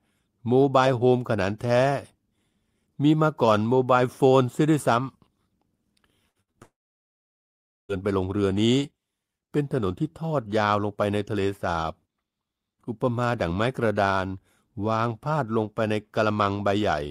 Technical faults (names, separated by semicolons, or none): burst of packet loss; short concealed packet loss; long network dropout